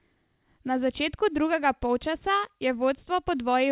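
Nothing stood out on listening to this speech carried over a G.711 A-law call path at 64 kbps, with its content stopping at 4 kHz.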